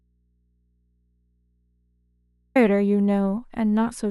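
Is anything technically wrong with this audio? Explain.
Yes. An audio dropout to a faint residue runs from the start to 2.55 s, likely from a lost input with the path still live, leaving only mains hum roughly 45 dB down.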